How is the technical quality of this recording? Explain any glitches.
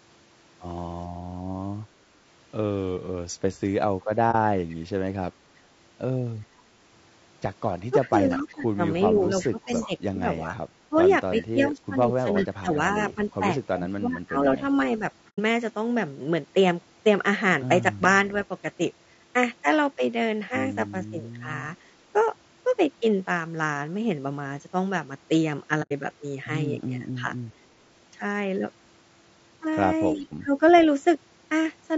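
Quality's fairly rough: the speech carries constant codec grit, plus a few dropouts, some leaked echo and a handful of dips in level.

Low-delay AAC compression runs the whole way through, with damage you can plainly hear. The speech sounds grainy, with noise between the harmonics and a thin top end. It's likely AAC-ELD at a low rate, and the sound fits something around 32 kbps, where short frames don't leave enough bits.

AAC frame loss with muting shows up at 4.31–4.35 s, 15.29–15.39 s and 25.82–25.92 s. The first hole lasts about 30 ms, which fits one lost frame. The other two last about 90 ms each, which fits three. The decoder zeroed the missing data, so each gap fades out and back in.

Echo leak is at 4.69–4.75 s, 8.01–9.87 s, 11.41–13.32 s and 30.15–30.8 s. You hear a copy of speech trailing about 360 ms behind. It's quiet at 4.7 and 30.2 s and loudest around 11–13 s. The likely cause is a loudspeaker on one end whose echo canceller let part of the signal through.

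Speech suppressed in double talk shows up from 7.9 to 15.01 s, where about 3 s in total gets pulled down by up to roughly 15 dB. Shorter dips come at 21.1–21.48 s (around 10 dB), 26.99–27.32 s (a mild few dB) and 30.16–30.53 s (around 15 dB). The likely cause is an echo canceller ducking speech while both sides talked at once.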